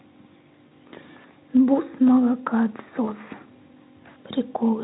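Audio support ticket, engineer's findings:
Filter restarted on every block, 0 to 1.61 s: regular ticking/buzz at about 31.2 Hz that tracks signal level. Filter state reset per block, each block starting from silence; rate fits a 512-sample buffer. Waveform shows evenly spaced small transients; spectrogram shows faint vertical lines at fixed spacing.

VoIP packet loss concealed by the speech codec, 0.67 to 0.73 s (about 40 ms lost) and 3.05 to 3.11 s (about 20 ms): sound smears into a fading buzzy tone or coloured noise. Decoder extrapolates last pitch and filter with decaying gain. Spectrogram shows flat, repeated harmonic bands; waveform shows a periodic, shrinking envelope. Speex coding elsewhere has at most faint artefacts.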